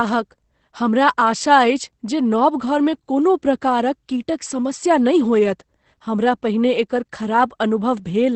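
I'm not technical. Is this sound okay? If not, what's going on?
No. Opus voice compression runs throughout: a low-rate speech coder drops everything above about 8.5 kHz and simplifies the voice, making it muffled, slightly hoarse and robotic.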